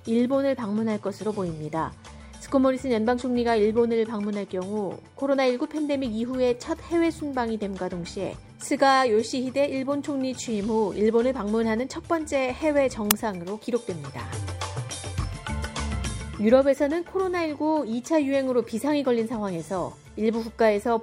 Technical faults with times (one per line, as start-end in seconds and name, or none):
13.11 uninitialised buffer